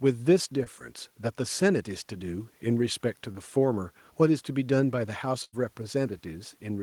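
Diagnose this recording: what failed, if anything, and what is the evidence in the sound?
The network stage dropped audio packets, and the receiver hid two brief losses with short concealed packet loss. At 0.63 to 0.68 s about 26 ms of synthesized sound covers a 20 ms hole, and at 3.32 to 3.36 s about 20 ms covers another 20 ms gap. In each spot the decoder extended the preceding speech, pitch-tracked if voiced or as shaped noise if not, then crossfaded back, so each is heard as a momentary smear or wobble.

Later the network lost a longer run of packets, producing a burst of packet loss from 5.44 to 5.54 s. Roughly 80 ms of real speech never arrived in time to be played, and the receiver filled about 85 ms by continuing the last sound while fading it down. This is heard as a held, decaying buzz or hiss, then speech resumes further along with the intervening stretch gone.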